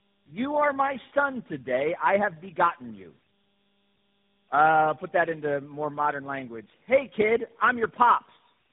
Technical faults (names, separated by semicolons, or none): tandem speech coding